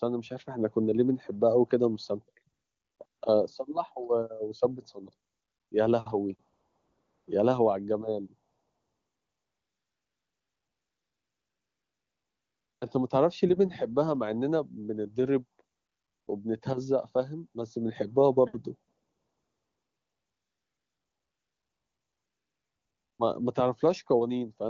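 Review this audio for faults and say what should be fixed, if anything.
AMR comfort noise: the sender's voice activity detection judged the talker silent and stopped sending speech frames. The receiver then filled each gap with smooth synthetic noise built from a rough level-and-spectrum description. The real background drops out and steady hiss switches in at 2.53–2.99, 3.05–3.21, 5.29–5.71, 6.51–7.27, 8.51–12.81, 15.75–16.27 and 18.91–23.19 s, with the longest stretches over four seconds. The wideband speech itself, which sounds like a high-rate mode, stays clean. To prevent this, disable discontinuous transmission or tune the voice activity detection to be less aggressive.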